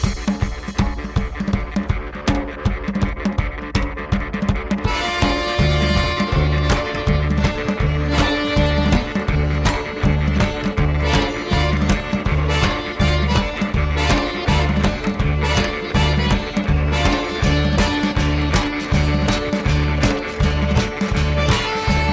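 No faults are audible anywhere in the clip.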